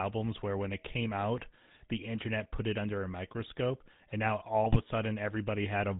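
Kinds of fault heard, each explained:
GSM full-rate codec: The whole clip has been through the first GSM speech codec. It models the vocal tract as a filter and drives it with a sparse, regular pulse train that keeps only every third excitation sample. Nothing above 4 kHz gets through, so the speech sounds narrow and dull. The coarse excitation gives the voice a buzzy, gravelly roughness that is plainly audible throughout. This fits the 13 kbps full-rate mode.
GSM bit errors: From about 4.64 s to 4.79 s, corrupted bits reach the speech decoder. When the filter, pitch or gain values it receives are wrong, it rebuilds each damaged frame with a bent spectrum or a sudden jump in level. Here the speech breaks into a short burst of squawks, pops and gargling. The burst lasts roughly 150 ms, which fits around seven consecutive 20 ms frames.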